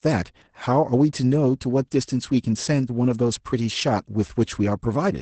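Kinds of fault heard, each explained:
Opus voice compression: muffled, slightly hoarse and robotic speech with nothing above about 8.6 kHz, from a low-rate SILK coder, which fits roughly 12 kbps.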